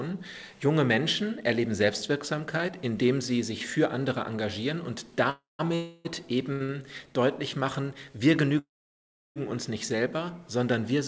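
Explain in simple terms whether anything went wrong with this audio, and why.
Yes, the sound stops and restarts a few times. There are three call audio freezes. One runs from 5.30 to 5.61 s and another from 5.75 to 6.07 s. The longest runs from 8.58 to 9.38 s. In each, the sound trails off, mostly into silence in the first and last. Then it picks up where it left off. Data was likely held up on the way, so the receiver ran out.

There are also two short stalls from a late packet, at 6.53 to 6.62 s and 6.64 to 6.70 s. A piece arrived late, so the last sound was held briefly. Then playback continued. Nothing is missing. The sound just lingers slightly too long.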